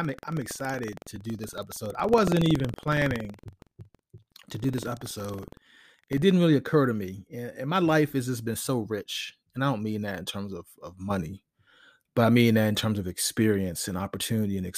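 Buffer tearing from 0 to 6.23 s, before "didn't really occur to". Each period splices in stale audio. Speech buzzes at 21.5 Hz, fitting a 2048-sample buffer.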